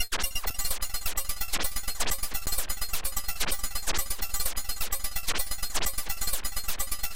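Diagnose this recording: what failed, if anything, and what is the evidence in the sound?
The driver or buffer stage missed its deadline twice and output blocks of digital silence. At 0.50 s a 5.3 ms gap fits a 256-sample buffer; at 2.46 s a 10.7 ms gap fits 512 samples. Each abrupt cut and return is short enough to be heard as a brief tick or dip.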